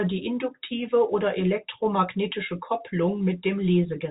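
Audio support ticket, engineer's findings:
No faults found; speech sits in the normal telephone band expected of G.711 coding, with nothing above about 3.8 kHz.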